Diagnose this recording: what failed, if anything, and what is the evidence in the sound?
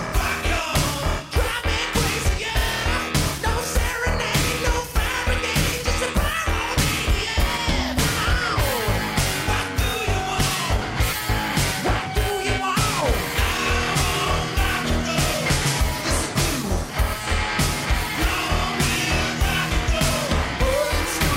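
Nothing failed: no stage in the chain, from analogue wiring through to playback, leaves any audible trace of a fault in this recording.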